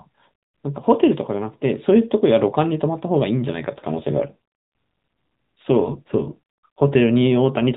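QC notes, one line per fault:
3.62–6.96 s: AMR rate drop. Speech turns buzzier and more synthetic with no gap or band change, which fits the mobile codec falling from 12.2 to 5.9 kbps.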